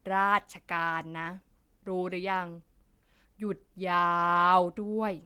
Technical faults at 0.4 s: none

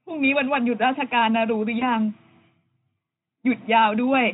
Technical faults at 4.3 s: none

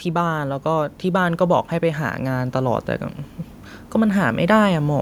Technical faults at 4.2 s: none

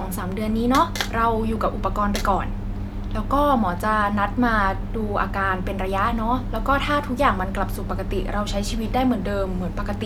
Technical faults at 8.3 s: none

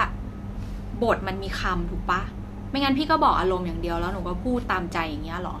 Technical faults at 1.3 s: none

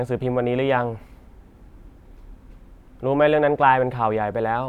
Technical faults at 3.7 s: none

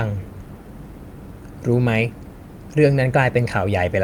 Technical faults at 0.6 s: none

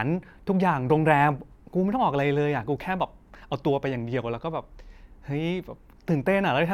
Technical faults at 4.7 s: none

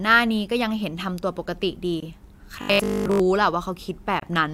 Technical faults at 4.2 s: gap at a join of encoded pieces

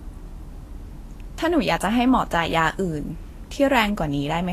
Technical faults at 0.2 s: Vorbis compression

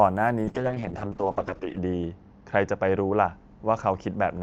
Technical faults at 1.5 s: call bitrate drop

